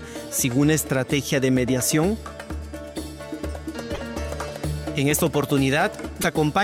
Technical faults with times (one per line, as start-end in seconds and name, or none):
3.93-3.99 broken MP3 bit reservoir
6.21-6.25 broken MP3 bit reservoir